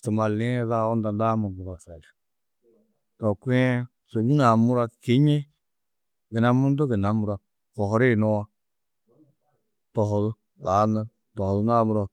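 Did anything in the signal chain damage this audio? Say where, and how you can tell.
No, there is no audible sign that any stage of the chain has damaged this speech recording.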